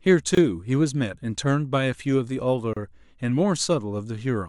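At 0.35 s the speech drops out for about 25 ms, until 0.37 s. At 2.73 s it drops out again for about 32 ms, until 2.77 s. Both are gaps at a join of encoded pieces. The audio was encoded in separate pieces and joined untrimmed. Each piece kept its encoder's silent start delay and its padded last frame. The silences have smeared edges. The speech then resumes exactly where it stopped.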